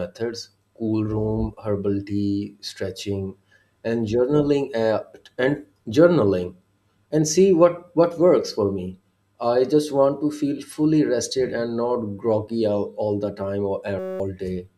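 Right near the end of the speech, from 13.99 to 14.20 s, there's a system hang loop: the machine or its driver stalled while the audio hardware kept replaying the same tiny chunk of its ring buffer. That chunk is only 5.33 ms long, which fits a 256-sample buffer, so it repeats 39 times at 188 Hz and comes across as a steady, flat buzz instead of a stutter. About a fifth of a second of real audio is gone underneath it.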